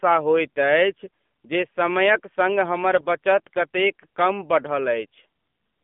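The speech runs through the AMR narrowband mobile codec, which fits a low AMR-NB mode around 7.4 kbps. That codec samples at 8 kHz and rebuilds the voice from a vocal-tract model fed by sparse pulses. Here the line band is limited to roughly 200 Hz to 3.5 kHz, so the sound is thin and muffled, and the codec damage is plainly audible as a buzzy, synthetic edge on the voice. From 2.96 to 3.07 s, right after "जे समयक संग हमर", AMR bit errors appear. On a weak link, a few percent of the less protected bits in each frame arrived flipped while the checks on the critical bits still passed. The decoder therefore placed its excitation pulses wrongly and applied slightly wrong pitch, gain and spectral values. The span fits about five 20 ms frames. Over that stretch the voice keeps roughly its pitch and loudness but turns hoarse, scratchy and gargly.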